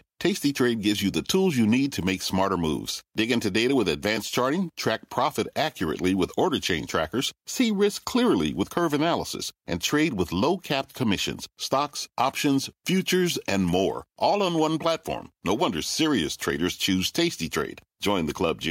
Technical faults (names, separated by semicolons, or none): none